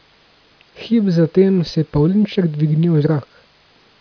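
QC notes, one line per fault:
Nothing to flag on this speech clip; I didn't hear anything that needs a note.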